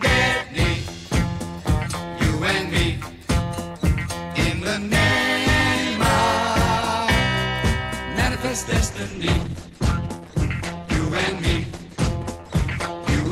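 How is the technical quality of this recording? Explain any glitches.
The recording starts out clean but loses quality abruptly near the end. From 8.90 s onward the adaptive stream drops to a lower bitrate, which fits a switch from roughly 64 to 12 kbit/s Opus after the connection slowed. The sound turns thin with no gap. On a spectrogram, content above 12.1 kHz vanishes at that instant, and the upper bands look smeared and blotchy.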